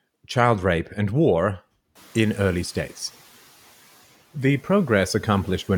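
At 1.95 s the room noise jumps by about 21 dB, and the noise suppressor is caught catching up. Its estimate still reflects the quieter background, so the louder noise passes through with less reduction, then sinks by about 5 dB as the estimate adapts over about 1.0 s, settling by 2.97 s. Unlike pumping, the level eases down once rather than breathing with the speech.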